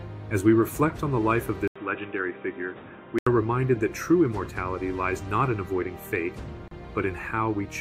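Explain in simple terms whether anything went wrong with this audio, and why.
Input switched to a poorer device, from 1.68 to 3.27 s: after a brief 80 ms silence, the sound turns dull and muffled, a little quieter and with new background hiss, because nothing above 3.8 kHz gets through. It likely comes from recording briefly switching to a weaker microphone or headset.

Gap at a join of encoded pieces, at 6.68 s: a 33 ms hole of silence cuts into continuous sound before it carries on. Two separately compressed pieces were joined, and the padding each compression step adds at its edges was never trimmed away.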